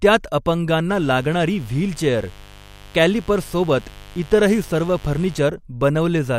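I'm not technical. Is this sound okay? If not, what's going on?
No, there's a mains buzz running under the speech from about 0.91 s to 5.39 s. It's a steady, raspy hum, fairly quiet next to the talking but clearly there. It comes from the 50 Hz electricity supply leaking into the recording, probably through something like a light dimmer or a poorly shielded cable, which adds sharp little spikes that make the hum sound gritty rather than smooth.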